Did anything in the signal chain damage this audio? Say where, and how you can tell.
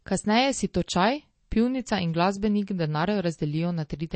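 Yes. Throughout the speech the sound is watery and swirly, with chirpy, metallic s sounds, smeared consonant attacks, and nothing at all above 8.4 kHz. This is likely MP3 compression at the codec stage: starved of bits at a rate that fits roughly 32 kbps, the encoder cut the treble and let weak frequency lines flicker on and off between frames.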